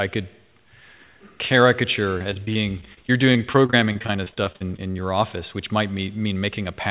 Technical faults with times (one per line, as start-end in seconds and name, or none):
2.18-4.97 repeated packet loss (robotic sound)